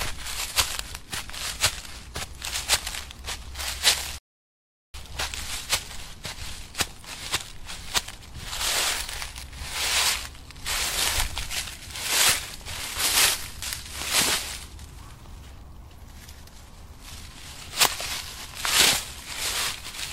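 At 4.18 s the sound cuts to silence and stays silent until 4.94 s, then picks up exactly where it stopped. This is a rebuffering stall: playback ran out of downloaded audio and waited for more, adding 758 ms without losing any material.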